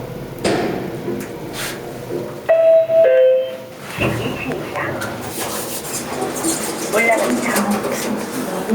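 A recording of everyday sounds with gain pumping throughout its length. The gain swings by roughly 10 dB, so loud and soft events sit unnaturally close together and the whole recording sounds squashed. The likely cause is input gain set far too high for the microphone, with a fast limiter or compressor repeatedly clamping down on each peak and releasing in between.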